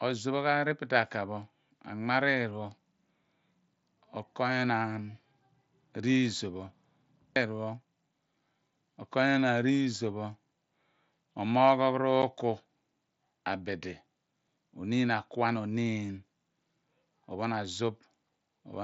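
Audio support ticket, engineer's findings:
Unconcealed Bluetooth headset packet loss at 12.22 s: a 7.5 ms hole with abrupt edges. It fits a single lost frame on the headset-to-phone link, filled with silence instead of concealed. The mSBC wideband path carries speech up to 8 kHz, with light grain.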